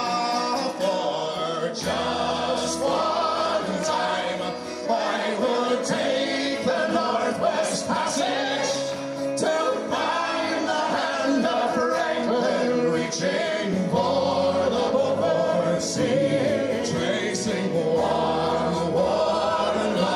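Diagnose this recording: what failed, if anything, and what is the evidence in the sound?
Nothing in the signal chain shows a failure: there are no dropouts, clicks, level jumps or distortion to point to at any stage.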